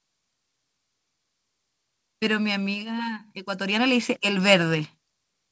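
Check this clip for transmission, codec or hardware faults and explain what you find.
One fault stands out: an automatic gain rising event between 3.44 and 4.61 s. The automatic gain control judged the incoming level too low and pushed its gain up by about 5 dB, ramping it in gradually over that stretch rather than in a single step. Because the boost acts on the whole signal, the speech and the background noise swell together, so the room floor lifts along with the talker and the level creeps upward instead of jumping. The audio carries nothing above 8 kHz, which fits a wideband call codec such as G.722.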